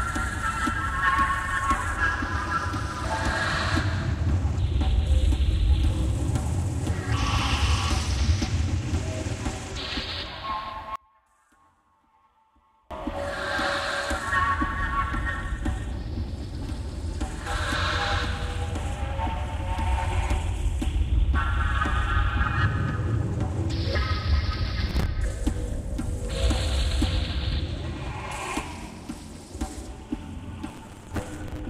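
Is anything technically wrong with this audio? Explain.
Yes, there are two kinds of fault.

From 10.96 to 12.91 s the level falls by about 33 dB and the sound almost disappears, leaving only a faint residue. This is most likely one channel inverted: with one side's polarity flipped, everything common to both channels cancels when they are summed to mono. The waveform shows a deep, sudden trough in amplitude for those two seconds, and the spectrogram fades to a weak, sparse trace.

Processor overload crackle appears twice, from 24.87 to 25.06 s and again from 30.69 to 31.59 s. The second burst is much longer and denser. The processor misses one small buffer deadline after another, and each miss replays a short stretch of old audio with hard edges. The spacing fits buffers of roughly 5 ms, with around ten misses in the first burst and dozens in the second. The result is a gritty tearing over the sound. 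On the spectrogram it appears as a comb of thin vertical broadband streaks, and the waveform shows repeated small jumps where the signal changes abruptly.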